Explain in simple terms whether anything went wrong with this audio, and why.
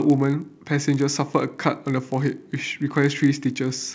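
A faint, steady buzz runs under the speech for the whole clip. This is a resampler restarted on every block. The audio was converted in 20 ms chunks, each handled alone. Every chunk edge leaves a tiny tick, 50 per second, heard as buzz whenever sound is present.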